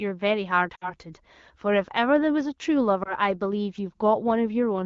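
At 0.75 to 0.93 s and again at 3.03 to 3.14 s, lost AMR speech frames break up the sound. Unlike a clean dropout to silence, the decoder stretches the last good frame with falling gain: first a fading smear fitting about 60 ms lost, then a brief warble.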